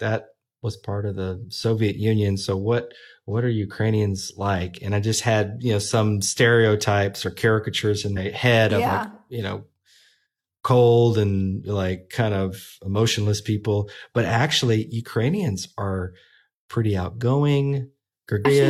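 At 8.13 to 8.18 s the speech breaks up briefly. This is damaged data in a compressed stream. Some bytes in the encoded audio were lost or overwritten. The decoder misread those frames and lost sync. It then hunted for the next valid frame header and resumed. The same fault returns at 18.41 to 18.46 s, near the end. Each burst lasts about 50 ms.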